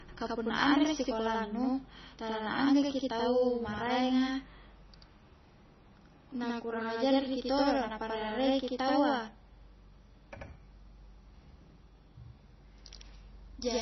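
Channel delay (doubling) runs through the whole recording, from the first second to the last. One channel arrives about 85.3 ms behind the other, which fits a 4096-sample buffer, and when the two are folded to mono the late copy stands apart instead of blending. Each syllable is followed by a second, equally loud repeat, so the speech sounds doubled, like a tight slap echo trailing every onset and consonant.

Low-bitrate audio saved at a high bitrate also affects the full length. Nothing is present above 5.9 kHz, so sibilants and consonant detail sound dull and muffled. This likely comes from an MP3 encode at a very low bitrate, around 24 kbit/s, later re-saved as a 256 kbit/s MP3. The larger file cannot recover the discarded highs, and the later encode adds essentially nothing.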